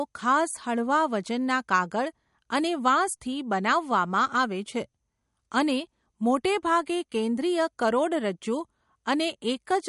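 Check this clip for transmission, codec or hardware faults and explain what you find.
There's one fault, and it runs the whole way through the speech: plainly audible MP3 compression, likely from a low-bitrate encode, which fits something around 48 kbps. Short of bits, the encoder has chopped everything above 11.2 kHz and keeps dropping weak frequency lines in and out frame to frame, so the sound comes across watery and swirly, s sounds get a metallic chirp, and consonant attacks smear.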